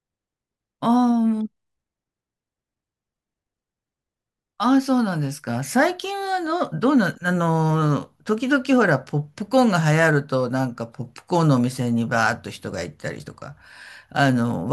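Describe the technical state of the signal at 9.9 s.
At 9.9 s the speech signal is intact, with no technical fault to be heard at that moment.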